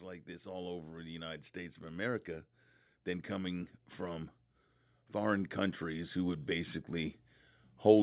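From 0.05 to 4.33 s, automatic gain rising lifts the level by about 8 dB, and again from 5.12 to 7.19 s by about 4 dB. The gain control judged the input too quiet, so speech and background swell together gradually, all within the narrowband, 4 kHz-limited call sound.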